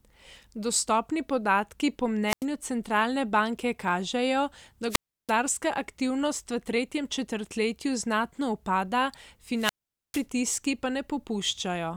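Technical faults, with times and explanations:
2.27 to 2.45 s, 4.89 to 5.33 s and 9.56 to 10.26 s, wireless microphone squelch dropouts: each time the speech thins into a quick burst of hiss, then drops into near silence for about 90 ms, 330 ms and 450 ms respectively before coming back. The mic's FM signal is fading, and once it's weak enough the receiver's squelch shuts the output off rather than pass pure static.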